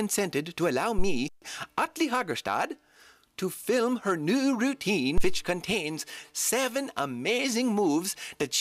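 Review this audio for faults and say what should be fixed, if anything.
Two phantom power thumps land at 0.98 to 1.26 s and 5.17 to 5.46 s, peaking around -13 and -12 dBFS and dying away in roughly 65 ms. That's the supply switching on a live input, with the voltage step pushed through the coupling capacitors. Mute the channel before toggling phantom.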